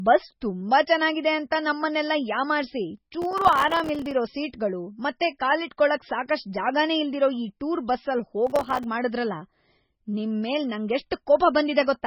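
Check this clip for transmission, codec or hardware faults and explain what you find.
Two faults are present: band-limited, watery coding damage throughout, and two bursts of crackle.

Throughout, nothing is heard above 5.6 kHz, and speech sounds swirly and smeared, likely MP3 compression at a very low bitrate, around 16 kbps, starving weak frequency lines.

Processor overload crackle occurs at 3.22–4.11 s and 8.47–8.84 s. Dozens of buffers of a few milliseconds each missed their deadlines, each leaving a hard-edged silent gap, heard as gritty tearing.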